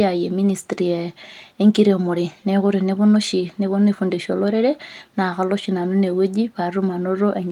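No technical faults are audible anywhere in this speech recording.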